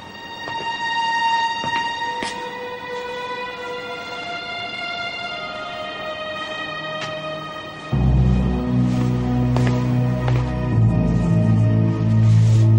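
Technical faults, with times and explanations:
No technical faults can be heard anywhere in the clip. There is nothing here that needs a time or an explanation.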